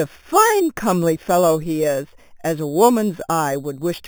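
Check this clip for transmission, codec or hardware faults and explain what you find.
One fault runs through the whole clip: imaging from sample-and-hold upsampling. Speech band-limited to a low rate was brought up to a higher one by repeating each sample unsmoothed, which fits an 8 kHz to 48 kHz step. Mirror copies fill 4 to 8 kHz at about 16 dB below the speech, giving a metallic fizz. Unlike steady hiss, it rises and falls with the speech, and its lowest copy moves against the pitch.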